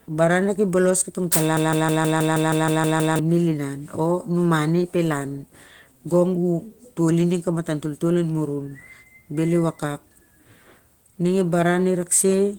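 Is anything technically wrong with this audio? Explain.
Yes, there is a broken-record loop. Just after "baran na ki bolos", from 1.57 to 3.19 s, a 0.16 s fragment of speech plays ten times back to back. The speech that should have filled that span is lost. The likely cause is a stall in the player, encoder or stream that kept re-sending its last buffered piece. On a waveform this looks like identical blocks tiled end to end. On a spectrogram it is a strip of the same pattern repeating every 0.16 s.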